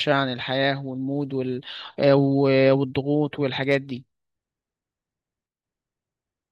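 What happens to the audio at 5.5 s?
At 5.46 s the speech and its background noise step down together by about 6 dB in a sudden gain jump, holding until 5.63 s, likely a digital gain setting applied with no ramp; unlike a fade, the level changes instantly rather than gliding.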